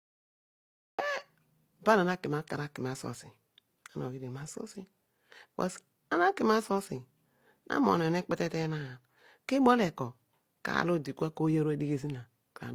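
The clip opens with digital silence until 0.99 s. Then speech cuts in mid-sound. There is no attack and no fade-in. This is a cut-off start: the recording or stream began late, after the sound was already under way.

Throughout, two sets of lossy-codec artefacts can be heard together. The likely cause is transcoding between lossy codecs. This fits HE-AAC at about 32 kbit/s, re-encoded by Opus at about 48 kbit/s. Nothing sounds above 20.2 kHz.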